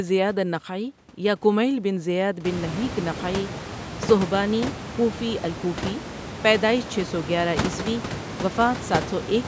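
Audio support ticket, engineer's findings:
No system fault found: the speech shows ordinary call microphone processing with nothing above 8 kHz, and the room noise rises by about 24 dB at around 2.5 s, then stays about 9 dB below the speech.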